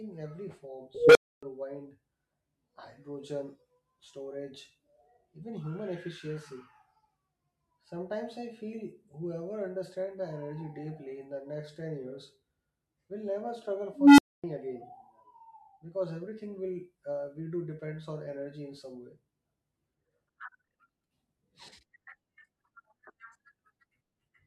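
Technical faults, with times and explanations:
0.95–1.43 s and 13.93–14.44 s: unstable filter. A recursive filter with bad coefficients feeds on its own output, so a tone around 500 Hz, then around 300 Hz, swells over 205 ms and 250 ms, clips, overflows, then cuts out for 275 ms and 255 ms.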